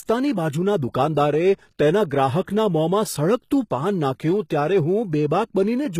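Speech throughout, with plainly audible HE-AAC compression as the likely cause: the treble is bright but synthetic, so sibilants sound gritty and metallic, which fits a low bitrate around 20 kbps. A spectrogram shows nothing above 14.9 kHz and upper bands that look like smeared copies of the lower harmonics. From 2.42 to 2.47 s there is pre-echo. Quantisation noise spreads about 53 ms ahead of a sharp attack, so a short hiss precedes it. The waveform shows low-level fuzz before the onset, and the spectrogram shows a broadband smear before it.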